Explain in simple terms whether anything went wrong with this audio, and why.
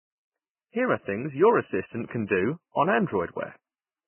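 The speech sounds dull and grainy from start to finish, with nothing above 3 kHz, which likely points to heavy Vorbis compression. Unlike a simple treble cut, the remaining sound is also rough and hissy, because detail was swapped for noise.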